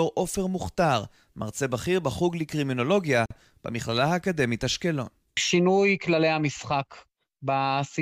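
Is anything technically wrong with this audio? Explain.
Yes. At 3.26 to 3.31 s there is a gap at a join of encoded pieces. The speech stops dead for about 47 ms, then resumes exactly where it left off. Two separately encoded sections were joined untrimmed. Encoder delay and end padding left this silence, its edges smeared.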